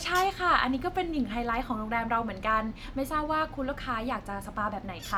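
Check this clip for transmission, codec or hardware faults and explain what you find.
Nothing faulty can be heard anywhere in this recording.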